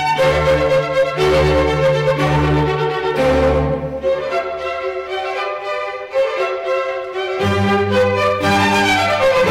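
Hard clipping runs through the whole clip. The signal is driven about 11 dB beyond what the stage can pass, so roughly a tenth of the samples are sliced flat at the ceiling. Those squared-off peaks add high harmonics, giving a harsh fuzz on every loud passage.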